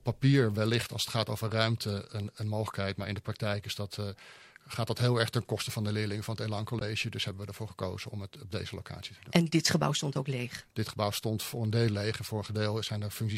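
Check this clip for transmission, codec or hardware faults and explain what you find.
There's one fault here: a brief stretch of damaged data in the compressed stream from 6.79 to 6.82 s. Some bytes in that part of the file were wrong, so the decoder lost frame sync and had to hunt for the next valid header. You hear it as a short glitch.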